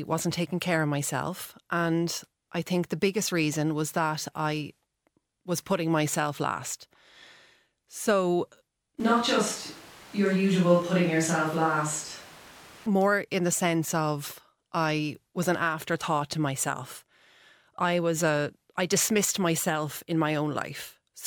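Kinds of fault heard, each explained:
Switch to a distant microphone: from 9.0 to 12.86 s the speech abruptly turns roomy, hollow and thin in the bass, then snaps back. The close mic likely dropped out for a farther one. Level stays steady, and room noise sits at roughly 25 dB below the speech.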